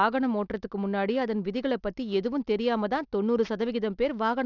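Aliasing runs through the whole speech recording. The audio appears to have been downsampled without an anti-alias filter, which fits a drop from 48 kHz to 12 kHz. Content above the 6 kHz fold point was mirrored back below it, landing at unrelated pitches roughly 30 dB under the speech. Sibilants sound gritty and metallic rather than just dull. A clean low-pass would only remove brightness, but here false tones fill the band right up to 6 kHz.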